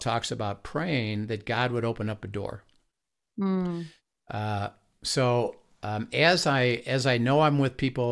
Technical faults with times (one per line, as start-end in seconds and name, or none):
none